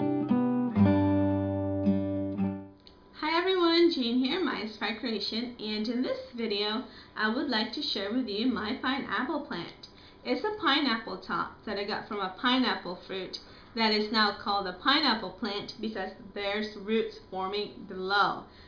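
Nothing stood out as a technical problem on listening.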